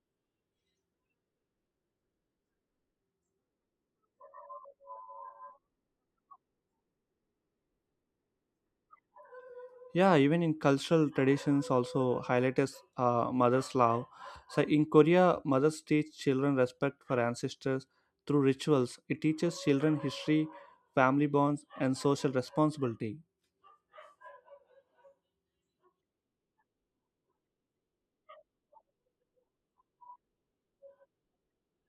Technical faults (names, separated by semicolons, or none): none